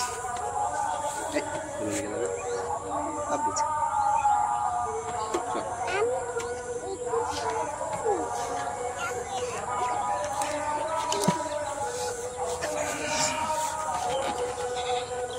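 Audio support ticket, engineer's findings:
Clock slip clicks, 0.15–15.32 s: faint regular ticks about every 0.15 s. Likely unsynced device clocks, roughly 150 ppm apart, slipping one sample each time.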